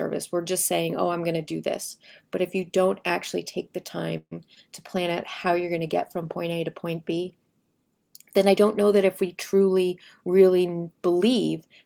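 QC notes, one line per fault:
4.17–4.35 s, call audio freeze: just after "don't actually take the", the last sound stretches into a fading buzz then brief silence, likely from delayed packets draining the jitter buffer.
4.55–4.58 s, short concealed packet loss: about 20 ms never arrived, so the receiver extrapolated the preceding sound, heard as a brief smear before blending back.
4.96–6.48 s, call bitrate drop: the encoder fell from 32 to 18 kbps, so coarser coding makes the sound rough and duller until the rate recovers.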